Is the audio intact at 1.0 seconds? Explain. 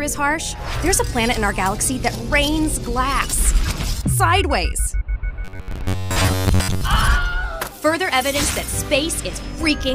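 Yes, the audio is intact at 1.0 seconds, with no dropout, click, distortion or other fault at that point.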